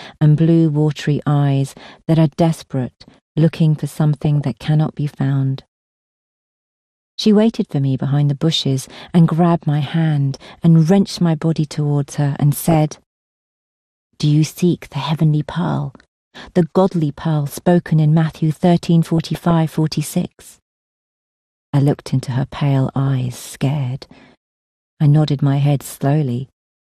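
Heavy low-rate MP2 compression, likely near 80 kbps, throughout: starved sub-bands switch off or quantise coarsely, so the sound is dull, gurgling and granular. DAB burbling at 4.21–4.49, 12.6–12.92, 19.04–19.51 and 22.99–23.55 s: weak-reception bit errors, well under one percent, corrupt a run of frames, so single bands get short blips of noise or jump in level.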